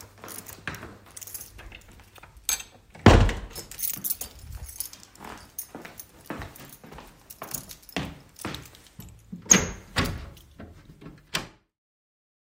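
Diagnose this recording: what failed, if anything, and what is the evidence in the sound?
Nothing in the signal points to a failure at any stage, and the only level change is a deliberate, smooth fade-out that begins at roughly ten and a half seconds and reaches silence at 11.83 s, with no click or hard edge.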